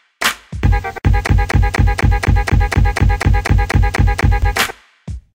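From 1.27 s to 4.42 s the audio falls into a broken-record loop: a 245 ms fragment repeats exactly, back to back, 13 times. The likely cause is a stalled player or stream resending its last buffered piece, so the intended sound is lost.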